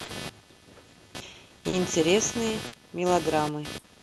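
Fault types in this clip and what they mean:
computer activity noise: Interference from the computer's changing load leaks through the shared ground into the audio. Here it is a buzz pulsing at roughly 300 per second, only about 10 dB below the speech. A spectrogram shows evenly spaced harmonic lines, and the waveform a repeating spiky ripple.
clock drift between sender and receiver: The sender's clock runs a few percent slower than the receiver's, so the jitter buffer keeps draining and the receiver holds or repeats small stretches. This gives uneven timing hiccups throughout, visible as tiny seams or duplicated fragments in the waveform.
short stall from a late packet: Four times a packet came late, and the empty buffer stretched the last sound for 50 to 60 ms before resuming where it left off, with nothing lost. A spectrogram shows brief flat, smeared bands, and the waveform a held, repeating cycle.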